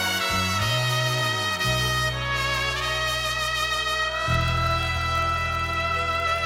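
Throughout, a block size mismatch (padded) buzzes at 43.1 Hz, fitting 1024-sample reads. Unlike dropouts, gaps are added, not audio lost, slowing to 0.999 speed.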